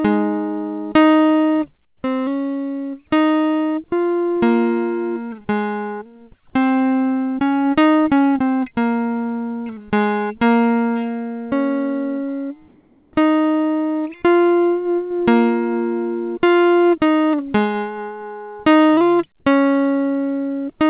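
Music heard through a narrowband call path with nothing above 4 kHz, which fits a G.711-style codec, has comfort noise in place of the background twice: 1.85–2.03 s (180 ms, about 4 dB quieter) and 12.68–13.13 s (450 ms, about 2 dB quieter). The quiet background turns into steady, featureless hiss, likely from discontinuous transmission with receiver-generated noise. Unlike a dropout or gate, the gap never falls silent. Texture changes, not just level.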